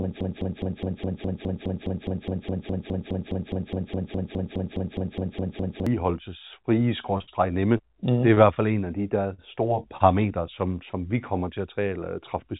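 Speech carried over a G.711 mu-law call path, with nothing above 4 kHz, has several transport faults. From the very start to 5.87 s a broken-record loop is already running. A 207 ms fragment repeats identically, back to back, 27 times, likely because the player or stream stalled and kept resending its last chunk. The repeats are exact copies with no decay or variation, which separates this from concealment, and the speech meant for those seconds is lost. From 7.18 to 8.58 s, just before "fald en af de", repeated packet loss gives a choppy, robotic sound. There are five separate gaps, the longest 58 ms, with about 40 ms of real audio missing. Its recurrence over more than a second distinguishes it from a single concealed loss. Two short stalls from late packets follow, at 9.34 to 9.40 s right after "en af de der", where the sound is held for 42 ms, and at 9.97 to 10.02 s, held for 28 ms. 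Unlike loss, nothing is skipped. The last sound is simply stretched until the packet arrives. At 10.91 to 10.95 s a short concealed packet loss replaces about 20 ms with synthesized continuation, heard as a brief smear rather than a hold. Finally, from 11.60 to 12.45 s, after "vi kommer til", a jitter buffer speed-up runs the speech at about 104% by trimming a few hundredths of a second. The tempo quickens while pitch stays unchanged.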